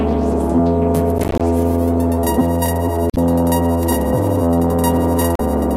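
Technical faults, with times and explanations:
1.18 to 1.41 s, processor overload crackle: a gritty burst of crackle tears through the music for about a quarter second. The processor missed a run of buffer deadlines, roughly ten of them at around 10 ms each, and each miss dropped a hard-edged gap of silence.
3.10 to 3.17 s and 5.35 to 5.41 s, damaged data in a compressed stream: brief glitches break the music. Corrupted bytes in the compressed stream made the decoder misread frames, lose sync and hunt for the next header.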